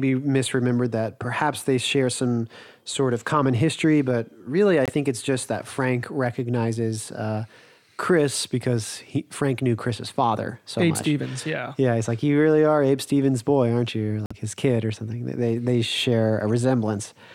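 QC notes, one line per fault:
4.86–4.90 s and 14.26–14.34 s, corrupt frame muted: the speech drops to abrupt silence for about 42 ms just before "it's just that", and for about 83 ms between "boy aren't you" and "his kid or something". Damaged compressed data was rejected by the decoder and silence was substituted. The first gap fits a single lost frame and the longer second gap fits a short run of consecutive frames. The speech resumes on time afterward with no shift.
11.38–11.41 s, corrupt frame decoded: a brief burst of misplaced energy about 28 ms long, peaking around −15 dBFS. It is heard as a chirp, squeak, blip or burst of noise laid over the speech. Flipped bits in what sounds like a single compressed frame were decoded anyway, so gains and spectral codes were misread. For the length of that frame, energy landed at the wrong frequencies.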